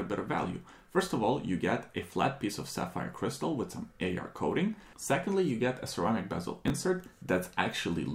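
At 6.68 to 6.70 s, chunks out of order: one 10 ms chunk arrived late and was played one chunk behind its place, swapping two neighbouring slices. Nothing is lost, but the three hard joins produce a brief jumbled flicker.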